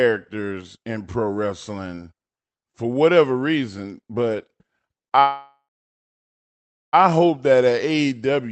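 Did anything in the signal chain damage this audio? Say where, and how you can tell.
Yes. A call audio freeze at the network stage, 5.19 to 6.95 s. The sound fades, falls silent, then resumes intact. Likely a jitter buffer underrun.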